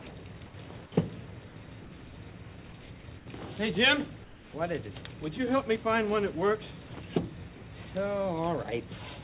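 At 0.02 to 0.06 s, the first 40 ms of sound is lost to a voice-detector dropout. The sender's detector likely took the onset for background and stopped sending, and comfort noise filled the gap. The waveform shows a flat, low hiss strip before the real envelope begins.

From 0.46 to 0.54 s, comfort noise replaces the background for 80 ms. This likely comes from discontinuous transmission during a pause, with synthetic noise standing in for the real room. It runs about 4 dB quieter, and on a spectrogram a smooth, textureless band replaces the grainy background.

From 1.48 to 2.9 s, the voice detector chops the sound, switching on and off repeatedly. This likely swapped about 480 ms of quiet edges for comfort noise, so the sound stutters. The waveform shows the envelope broken into pieces separated by uniform noise patches.

The same background replacement returns at 3.18 to 3.26 s and 4.24 to 4.54 s, about 4 and 5 dB down respectively. 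The longer 300 ms patch shows on the spectrogram as an even smear within the band, which stops at 4 kHz, consistent with a narrowband G.711 call.

Two more brief dropouts occur at 6.88 to 6.9 s and 7.56 to 7.62 s. Each is likely the detector briefly misjudging the sound and clipping it, losing about 20 and 30 ms. Each appears as a small notch of hiss cut into the waveform.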